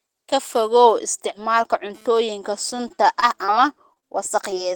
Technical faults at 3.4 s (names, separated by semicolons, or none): repeated packet loss (robotic sound)